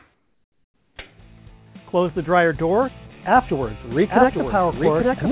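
From 0.14 to 0.96 s the real background gives way to comfort noise, a flat, featureless hiss about 8 dB quieter, likely from discontinuous transmission filling the gap. At 4.08 s a doubled audio track kicks in and runs to the end: a second full-band copy trailing roughly a second behind, a bit quieter, starting abruptly with no room colour, likely a slower capture path or misaligned edit.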